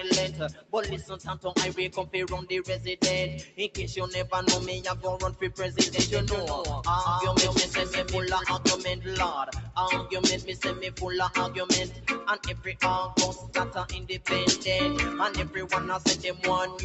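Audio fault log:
Throughout: noise suppressor applied to music or sounds. A speech-oriented suppressor keeps treating sustained parts of the sound as noise, so level rides up and down by roughly 5 dB as it clamps and releases. Attacks pass while held tones and tails sag, giving a pumping, thinned texture. On a waveform the envelope breathes irregularly after each onset. On a spectrogram sustained bands fade unevenly while transients stay bright, all beneath a ceiling near 8 kHz set by the call path.
0.3–0.73 s, 1.89–2.14 s, 3.44–3.77 s, 9.59–9.77 s, 11.88–12.07 s, 13.35–13.54 s, 16.16–16.43 s: sound cut by the noise suppressor. In each window the suppressor misjudged a steady or decaying stretch as noise and pulled it down harder than its surroundings. The deepest drops are about 10, 9, 10, 9, 6, 6 and 7 dB respectively. Each lasts a fraction of a second and leaves a brief hollow dip. A waveform shows a sudden notch in the envelope. 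A spectrogram shows a short vertical band of faded energy, with decays cut off early.
5.86–8.44 s: doubled audio track. A second full-band copy, at about the same loudness as the original, trails it by a fifth of a second, so every event repeats as a hard slapback with no room colour. It most likely comes from a second, slower capture path mixed in alongside the first. The copy switches on and off abruptly at the edges of the span. On a waveform each transient appears twice at a fixed spacing. A spectrogram shows each onset duplicated to its right.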